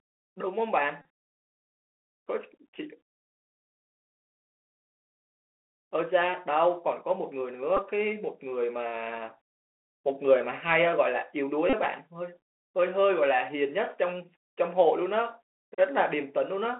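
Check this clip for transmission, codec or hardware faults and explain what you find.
There are two problems: the whole recording has gone through a Bluetooth CVSD headset codec, and there are three short Bluetooth headset packet repeats.

The CVSD damage runs through all of the speech and is easy to hear. The band is squeezed to a telephone-style 300 Hz to 3.4 kHz, which fits the 64 kbps CVSD headset link. This codec sends just one up-or-down bit per sample and adapts its step size as it goes. Loud, bright sounds move faster than the step can follow, so they distort, sibilants turn scratchy, and a grainy hiss sits under everything.

The packet repeats land at 1.02 to 1.05 s, 7.77 to 7.79 s and 11.70 to 11.73 s. In each spot the headset lost audio, about 34 ms for the first and third and about 11 ms for the middle one. The chip filled the gap by decoding the last good packet again and again. 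Repeating every 3.75 ms produces a brief buzz near 267 Hz, and the longer gaps fit roughly nine repeated packets.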